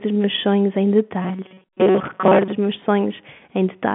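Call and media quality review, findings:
Robotic sound from repeated short buffers, 1.22 to 2.52 s. Speech becomes a rigid metallic buzz near 188 Hz, fitting a roughly 5.3 ms repeat. Likely cause: buffers arriving late, playout looping the last chunk, most real audio skipped.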